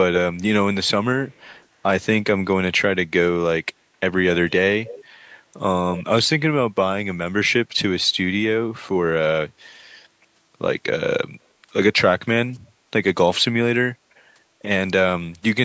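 A faint delayed copy of the speech trails it from 1.29 to 1.65 s and returns much louder from 4.85 to 5.04 s, about 260 to 270 ms late. This is echo leak, likely from a far-end loudspeaker whose echo canceller let its microphone pickup back into the call.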